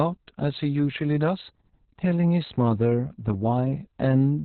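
From start to finish the speech carries heavy Opus voice compression. The sound points to SILK in narrowband mode at about 6 kbps, with nothing above 4.2 kHz. The linear-prediction coder quantises the excitation coarsely, so the voice comes out muffled, hoarse and slightly robotic.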